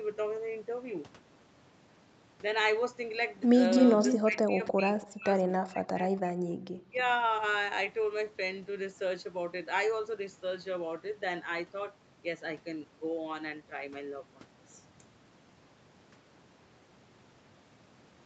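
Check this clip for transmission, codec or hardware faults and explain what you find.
Two related faults turn up between about 3.8 and 7 s, both pointing to a loudspeaker-side echo canceller struggling during a stretch of overlapping talk.

Echo leak, at 3.82–4.18 s, 5.01–5.07 s and 5.53–5.57 s: the far end's canceller likely failed to subtract all of what its microphone picked up from its loudspeaker, so part of the signal was sent back. You hear a copy of the speech delayed by 281 ms. The first burst is about as loud as the original, and the two later scraps sit roughly 25 dB down as brief fragments.

Speech suppressed in double talk, at 4.2–4.9 s, 5.1–5.29 s, 5.45–6.36 s and 6.74–6.97 s: with both sides talking, the canceller couldn't tell the local talker from loudspeaker echo and attenuated everything it picked up. The speech dips or drops out in pieces, by about 20 dB in the first and last spans, and by around 40 and 35 dB in the middle two. 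The 5.45 s span is the longest, at roughly 0.7 s of affected speech.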